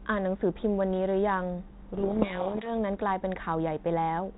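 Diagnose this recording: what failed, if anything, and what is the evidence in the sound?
Codec payload misread, codec stage: from 1.94 to 2.72 s the speech drowns in harsh distortion as G.726 code words arrive bit-reversed. Unlike low-bitrate hiss, it starts and stops abruptly while the 32 kbit/s path otherwise shows only light coding damage.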